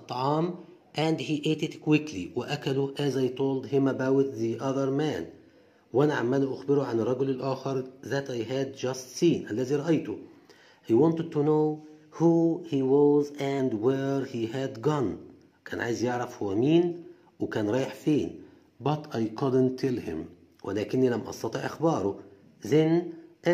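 Drift correction steps occur at 1.02–1.87 s, 7.35–8.00 s, 11.46–13.59 s and 18.86–20.20 s. Playback speed jumps about 6% faster, then slower, alternating, shifting pitch roughly a semitone up or down before snapping back, likely clock-matching rate corrections.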